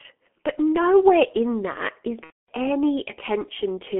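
The clip is speech passed through the G.723.1 codec from start to end. The band runs only from about 250 Hz to 3.4 kHz, so the sound is thin and muffled. Coding damage is heavy. The voice sounds hoarse and consonants smear together. The coarse, slowly updated voice model points to a very low rate of around 6 kbit/s. At 2.24 s to 2.49 s there is VoIP packet loss concealed by the speech codec. About 240 ms of audio is missing, which fits eight lost 30 ms frames. The decoder fills the gap by repeating its last pitch and filter settings at falling gain. The result is a stretched sound that fades and then mutes from the third lost frame on. Because each frame builds on the one before, the speech stays weak or distorted for a short time after the gap ends.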